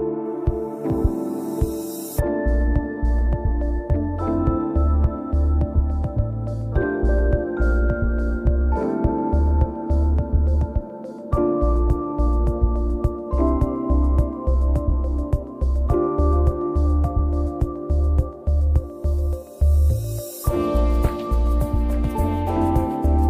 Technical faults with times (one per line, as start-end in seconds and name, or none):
none